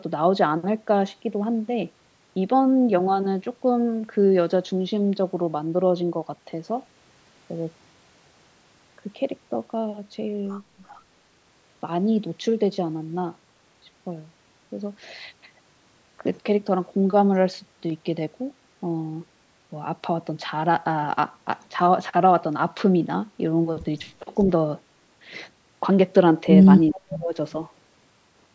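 At 10.88 to 10.99 s there is an echo leak. The far end's echo canceller likely failed to remove all of the loudspeaker sound reaching its microphone, so a scrap of the speech came back 387 ms late. The stray copy is very faint, around 35 dB below the main speech, and lasts about a tenth of a second.

Later the speech is suppressed in double talk, twice. With both sides talking, the echo canceller likely could not tell its own talker from loudspeaker echo and turned the talker down along with it. At 24.20 to 24.31 s the speech dips only slightly, by roughly 5 dB, for about a tenth of a second. At 26.93 to 27.35 s the suppression is much heavier, roughly 30 dB, and the speech all but drops out for about 0.4 s. The call's microphone processing is also audible in the band limit, with nothing above 8 kHz.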